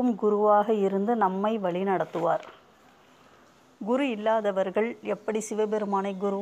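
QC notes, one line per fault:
No faults found on review; nothing to log.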